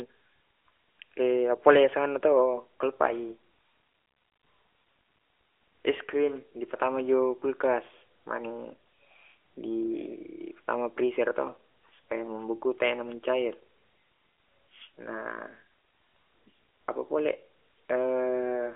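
No faults can be heard.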